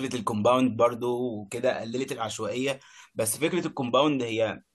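A short speech recording with no technical faults to report anywhere along its length.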